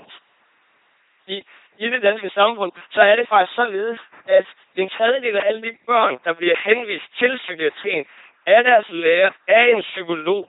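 From start to finish the speech has been through an LPC-10 vocoder, and the heavy damage points to a rate around 2.4 kbit/s. Each moment is resynthesised from a short all-pole filter excited by either a pulse train or noise, giving a buzzing, mechanical robot voice. On a spectrogram, voiced stretches show rigid, evenly spaced harmonic stripes under smeared formants, unvoiced ones flat noise, and nothing appears above 3.8 kHz.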